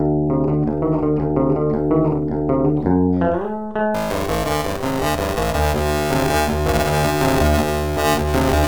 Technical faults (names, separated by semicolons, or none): buffer tearing